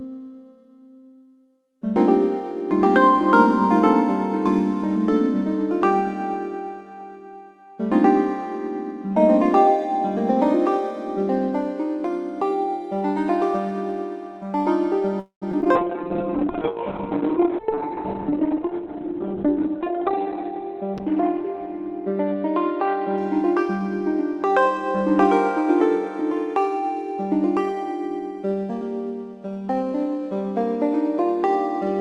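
At 15.19 s the sound stalls for about a quarter of a second, until 15.44 s. The last moment is drawn out as a buzz or hiss that dies away, and roughly 120 ms of that stretch is silent before the audio resumes where it left off. Nothing is lost, but the audio after it now runs about 222 ms later. This call audio freeze likely comes from packets held up in transit: the jitter buffer ran dry and the receiver filled the wait.

Right behind it come three brief smears: 15.52 to 15.55 s, 15.61 to 15.64 s, and 15.64 to 15.67 s. Each is short concealed packet loss. Audio failed to reach the decoder in time, and the receiver bridged the hole by extending the preceding sound and blending back. Here more was missing than was filled: about 20, 60 and 20 ms respectively. Short bits of the sound are skipped, and the second gap also trims the delay by roughly 40 ms.

From 15.77 s the sound turns rough and muffled, and stays that way until 24.50 s. 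This is a call bitrate drop. The bandwidth estimate fell, so the Opus encoder went from the 40 kbps it had been using down to 6 kbps, holding the lowest rate for about 4.0 s. Coding becomes coarse, and the top of the spectrum is cut from 12 kHz to 4 kHz. The sound clears once the bitrate recovers.

Inside that stretch, between 15.98 and 16.46 s, the sound drags, playing at about 93% speed with its pitch unchanged. This jitter buffer slow-down came from the receiver rebuilding its reserve. It repeated single pitch periods or fragments of pauses many times over, adding about 39 ms in total, which draws the sound out.

From 17.33 to 19.35 s the opposite happens. The audio rushes at about 108% speed, again at the same pitch, which is fast enough to sound hurried. In this jitter buffer speed-up the buffer was holding more than its target, as it does after a burst of late packets arrives together. 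To cut the delay, the receiver snipped out short pieces one or a few pitch periods long, removing about a fifth of a second overall.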